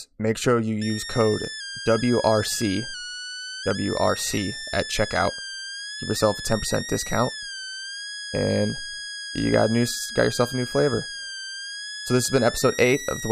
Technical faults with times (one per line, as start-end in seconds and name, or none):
0.81-13.32 switching supply whistle